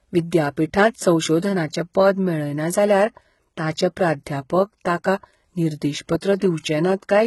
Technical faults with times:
0.00-7.26 HE-AAC compression

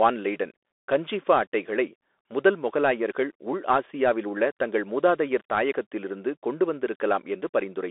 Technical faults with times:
0.00-7.91 Bluetooth CVSD headset codec

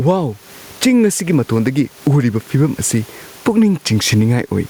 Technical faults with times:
0.00-4.70 gain pumping

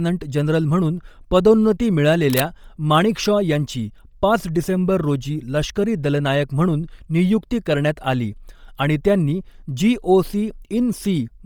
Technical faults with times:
0.00-11.45 Bluetooth LC3 compression
2.27-2.44 cable scratch noise

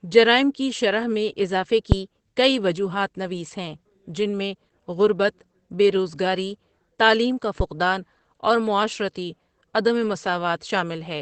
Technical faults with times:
0.00-11.21 Opus voice compression
1.92-2.01 phantom power thump

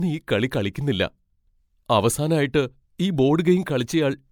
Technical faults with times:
0.00-4.31 generation loss

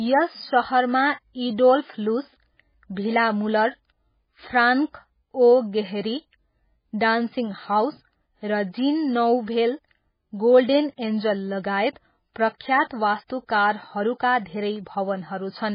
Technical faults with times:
0.00-15.75 MP3 compression

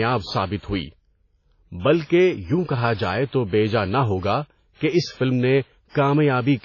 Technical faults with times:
0.00-6.65 transcoding between lossy codecs

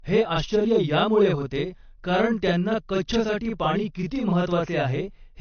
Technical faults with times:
0.00-5.41 channel delay (doubling)
0.00-5.41 low-bitrate audio saved at a high bitrate

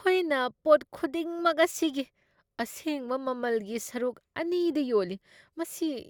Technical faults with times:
none

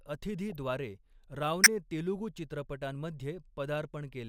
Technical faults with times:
0.50-0.56 corrupt frame decoded
1.64-1.67 corrupt frame decoded

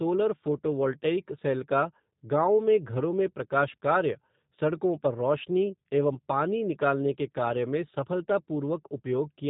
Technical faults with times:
0.00-9.50 G.729 codec

